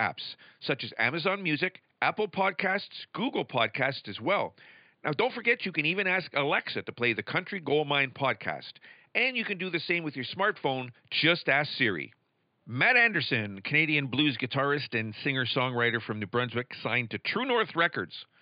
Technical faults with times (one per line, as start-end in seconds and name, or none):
none